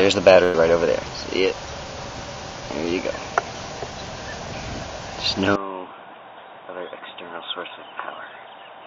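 From 0.43 to 0.56 s the sound briefly smears into a held, fading continuation of itself, then picks up again with about 100 ms missing. This is a burst of packet loss: the receiver filled roughly 103 ms by stretching the last received sound and fading it down.

At 5.56 s, with no gap, the audio turns abruptly dull and boxy, drops by around 10 dB, and carries nothing above 3.8 kHz, with a new noise floor some 35 dB below the signal. The likely cause is the input being switched to a poorer device through to the end.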